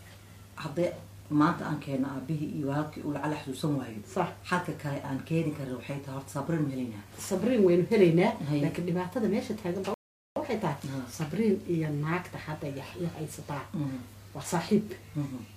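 At 9.94 s the player runs out of downloaded audio and has to wait for more to arrive, a rebuffering stall. Playback halts abruptly into silence until 10.36 s, then picks up exactly where it left off, with nothing skipped or repeated. The gap adds 0.42 s to the running time. The sound on either side of the break joins seamlessly, so the fault is heard purely as a sudden pause in the middle of the audio.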